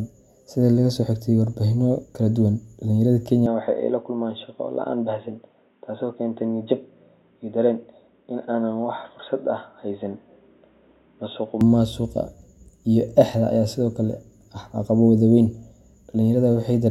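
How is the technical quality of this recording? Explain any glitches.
There's one clear glitch. From 3.46 to 11.61 s the speech turns dull and boxy, nothing above 3.8 kHz, a few dB quieter, with a faint new noise floor, and no gap at the switch. That's likely the input switched to a poorer device, a narrower-band mic, until it snaps back.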